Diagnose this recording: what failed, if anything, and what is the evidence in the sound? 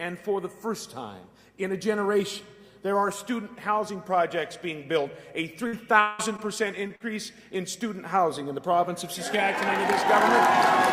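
Burst of packet loss at 5.67 to 5.75 s, in the network: the receiver continued the last sound and faded it for 54 ms, covering 60 ms of missing audio.

Long network dropout is the likely cause at 6.01 to 6.21 s: a 179 ms fading continuation of the last sound stands in for 180 ms of lost audio.

Short concealed packet loss at 6.37 to 6.40 s, 6.88 to 6.92 s and 6.96 to 7.02 s, also in the network: brief smears where gaps of 20, 20 and 40 ms were bridged from the preceding sound.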